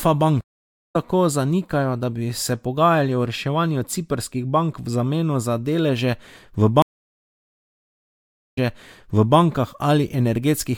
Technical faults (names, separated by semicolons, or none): stream reconnect